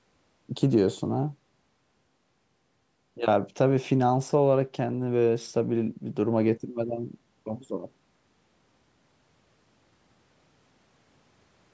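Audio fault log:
No faults turn up in this speech; it's just gone through a call's microphone processing, which trims the deepest bass and leaves nothing above 8 kHz, and that's all normal.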